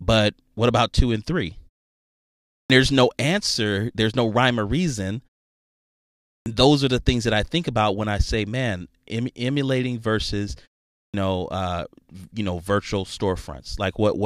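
Clipped start after a pause occurs three times. The output device idles in silence and wakes late, so each onset is swallowed. At 2.59 s, "there's no answer there's" snaps in, missing 109 ms. At 6.35 s, "those are the things" loses 110 ms. At 11.02 s, after "emulating versus", "know uh you know" loses 117 ms.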